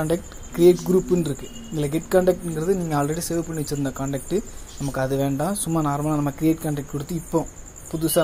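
No technical faults are audible.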